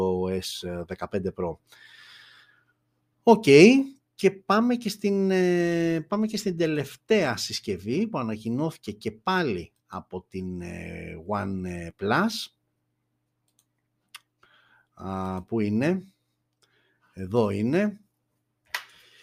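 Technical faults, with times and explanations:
No technical faults are audible anywhere in the speech.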